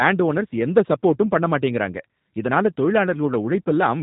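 From start to finish the speech carries G.729 codec damage, and it's plainly audible. The codec rebuilds each 10 ms frame from a vocal tract filter, a pitch estimate and a handful of pulses, so the voice comes out a bit rough and synthetic. Nothing gets through above 3.8 kHz, so it sounds boxy and dull, all of which fits an 8 kbit/s G.729A stream.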